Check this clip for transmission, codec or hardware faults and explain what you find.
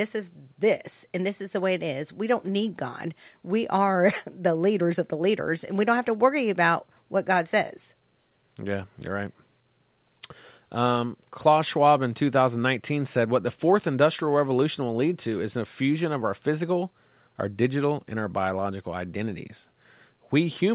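No transmission, codec or hardware faults turn up anywhere in the speech. It has come through a working call path, and the narrowband sound with nothing above 4 kHz fits the G.711 A-law codec that path uses.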